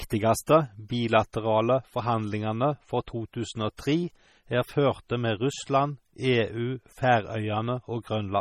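Speech running the full clip carries MP3 compression damage, and it is heavy. Sibilants chirp metallically, the sound has a watery, swirling quality, and consonant attacks smear, which likely comes from low-bitrate MP3 encoding, fitting something near 32 kbps. On a spectrogram, nothing appears above a flat ceiling at 16.5 kHz, and the upper bands break into speckled patches that blink on and off frame to frame. Onsets in the waveform look softened rather than sharp.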